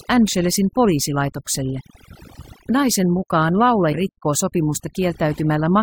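Overdone noise removal runs through the whole speech recording: a noise reducer set far too aggressively pulls individual frequency bands down whenever they sit near its noise estimate, taking quiet parts of the voice with them. The background drops and breaks up into twinkling specks.

Damaged data in a compressed stream appears from 3.91 to 3.94 s: corrupted bytes in the encoded stream make the decoder misread those frames and lose sync while it hunts for the next valid frame header, producing a brief glitch in the audio.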